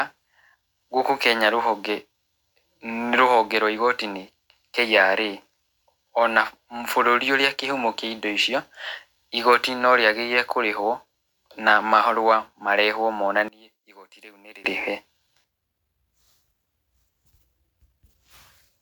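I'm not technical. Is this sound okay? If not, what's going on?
No. From 13.48 to 14.65 seconds the speech suddenly shrinks to a faint trace, then returns. The likely cause is one channel inverted: one stereo side is flipped, so when both sides are combined, the centred voice cancels itself out.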